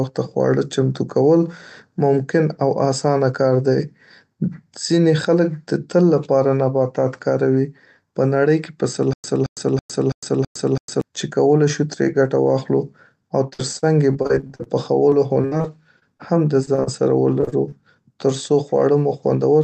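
Stutter with silent gaps, 9.13 to 11.01 s: the same 0.22 s fragment returns six times at a steady 0.33 s period, each separated by about 0.11 s of dead digital silence. This is likely a stalled stream replaying its last buffer on each retry, and the sound that should have filled this time is lost.

Repeated packet loss (robotic sound), 13.49 to 14.68 s: twelve gaps, the longest 49 ms, are patched by extending the preceding sound, so about a quarter of the stretch is synthetic. The result is choppy, with pieces missing. It recurs from 15.10 to 16.21 s, with eight gaps of up to 60 ms, and again from 17.41 to 17.74 s, with four gaps of up to 28 ms, each with the same chopped quality.

Short stall from a late packet, 16.65 to 16.69 s: a packet arrived about 22 ms late, the jitter buffer ran dry, and the receiver held the last sound for 22 ms before resuming from the same point. Nothing is lost, but a sound is briefly drawn out with a faint buzz or dip.

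Short concealed packet loss, 16.75 to 16.80 s and 16.84 to 16.89 s: in each, 20 ms of audio never reached the decoder in time. The gap was bridged by continuing the prior sound for 22 and 29 ms, then crossfading back, which leaves a quick smear or wobble where a brief sound may have dropped out.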